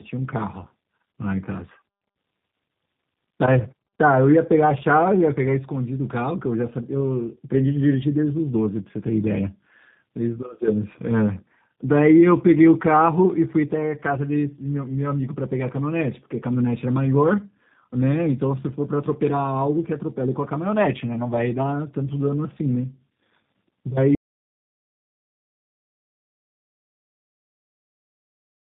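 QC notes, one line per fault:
throughout: tandem speech coding. The speech passed through two low-rate speech codecs in a row, AMR-NB at 10.2 kbit/s and then G.729A at 8 kbit/s, with a G.711 mu-law 64 kbit/s link between them. Each coder models speech from input already damaged by the one before, so their errors compound. The result is rougher, more muffled and warblier than either codec alone, with nothing above 3.7 kHz.
24.15 s to end: audio dropout to silence. The input signal stopped reaching the recorder, likely through a lost link or a disconnected or muted source, while recording carried on writing silence. The speech cuts off abruptly and the rest of the clip is silence with no room tone. Whatever was said after that point is gone and cannot be recovered.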